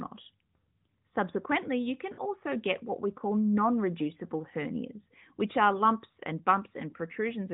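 A speech recording carried over the AMR narrowband mobile codec has a dropout from 2.14 to 2.21 s, between "you can" and "get what we call". The sound smears and sags for about 40 ms, which fits two lost 20 ms frames. These are lost AMR speech frames, where the decoder repeats the last good settings at falling gain.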